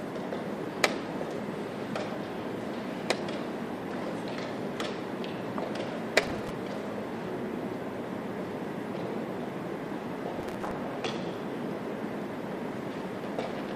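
A gritty burst of crackle tears across the sound from 6.23 to 6.51 s, and again from 10.36 to 10.71 s, each ending abruptly once it passes. This is processor overload crackle. The processor fell behind on many short audio buffers in a row, and each missed deadline replayed a scrap of old audio with hard edges. The fine, rapid grain of the tearing points to buffers only a few milliseconds long.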